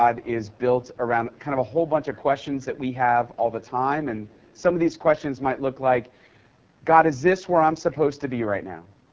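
Throughout the speech, the AMR wideband (HD Voice) codec runs at a heavy level of damage, and the rough, raspy texture fits its lowest 6.6 kbit/s mode, where the pulse-driven vocal tract model is too coarse and the band above 6.4 kHz is only shaped noise.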